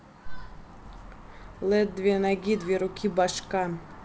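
Nothing stood out on listening to this speech, which comes through G.722 wideband telephone coding at 64 kbit/s.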